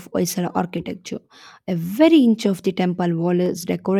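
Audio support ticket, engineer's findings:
Two sharp single clicks in the speech at 0.78 s and 3.46 s, likely dropped samples. A fraction of a millisecond goes missing, so the waveform jumps straight to a later value.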